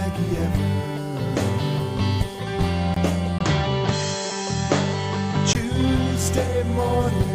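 At 2.94 to 2.96 s the sound drops out for about 22 ms: a gap at a join of encoded pieces. Two separately encoded segments were butted together without trimming the encoder's start-up delay and end-of-stream padding, so a sliver of silence sits in continuous sound. It is heard as a tiny hole before the sound resumes exactly where it left off. On the waveform it appears as a flat, near-zero notch with slightly softened edges. A spectrogram shows a narrow vertical blank stripe across all frequencies.

From 3.39 to 5.55 s the tone changes abruptly. The sound goes duller and boxier, and nothing remains above 7.9 kHz. This is most likely an input switched to a poorer device, with the recording moving to a narrower-band microphone or headset path and then back. The switch is marked by a short silence of about 20 ms. The loudness stays roughly the same, but a faint new background noise appears far below the sound. 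On a spectrogram, the upper band is sharply cut off at 7.9 kHz across that stretch, forming a clean horizontal ceiling.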